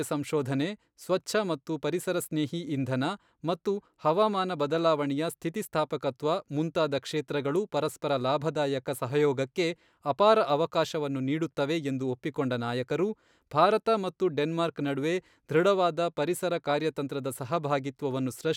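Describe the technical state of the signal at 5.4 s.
At 5.4 s the speech signal is intact, with no fault audible at that moment.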